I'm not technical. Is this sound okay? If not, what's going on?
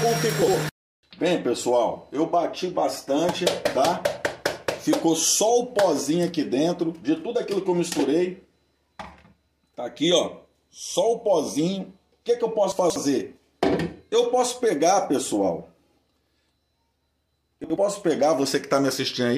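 No. At 0.42 to 0.54 s, 12.72 to 12.96 s and 17.64 to 17.76 s the sound briefly jumbles. These are chunks out of order: short 60 ms pieces arrived late and played after what should follow, one, three and one pieces late.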